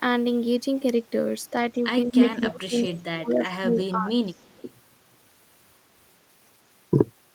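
Speech, with speech suppressed in double talk at 1.73–1.84, 2.05–2.21, 2.39–2.77 and 3.21–4.45 s. The voice dips by up to about 25 dB, likely as an echo canceller ducks both talkers. Echo leak adds a copy 170 ms late at 2.11–2.48, 2.82–3.03, 3.75–3.80 and 4.35–4.73 s. It is likely residual loudspeaker echo that was not cancelled. The first copy is louder than the voice, and the later ones are faint.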